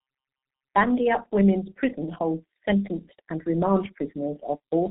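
From start to finish the speech carries heavy G.723.1 codec damage. Nothing reaches above 3.8 kHz, so it's muffled, and the coarse, slow-updating voice model leaves it hoarse with smeared consonants, which fits a bitrate around 6 kbit/s.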